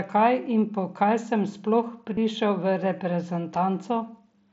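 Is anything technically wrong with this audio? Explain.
Yes. Concealed Bluetooth headset packet loss occurs at 2.15 to 2.17 s, just after "po kaj sem sploh". A short run of voice packets from the headset, about 22.5 ms of audio, which points to a few consecutive packets, never reached the phone. The receiver patched the hole by repeating the best-matching stretch of the most recent waveform. Because this run spans several packets, it is heard as a brief buzzy, held tone at full level, with a slight warble as the real speech resumes over the wideband mSBC headset link.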